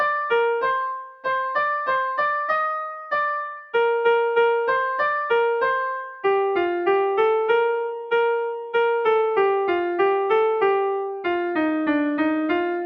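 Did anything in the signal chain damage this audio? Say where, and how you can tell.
Yes. Sound cut by the noise suppressor, from 1.04 to 1.26 s, at the call-processing stage. For about a fifth of a second the level sinks, by about 13 dB at its deepest, and then recovers. The suppressor misjudged this stretch as background noise and applied its attenuation to it, pulling the sound down well below its surroundings rather than leaving it at its natural level.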